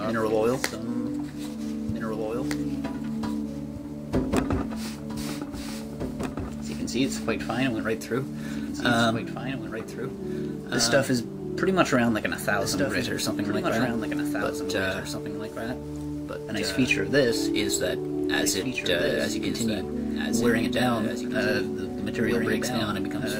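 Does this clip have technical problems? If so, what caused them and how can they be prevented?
Yes. Throughout, every sound repeats about two seconds later, about 5 dB quieter and without decay or room colour: a doubled audio track, likely from a slower second capture path or an edit holding two offset copies. Prevent it by feeding only one capture path into the mix and checking edits for duplicated, misaligned layers.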